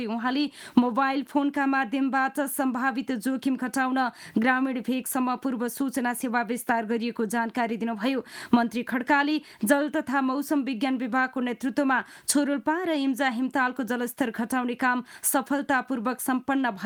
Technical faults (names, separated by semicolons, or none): none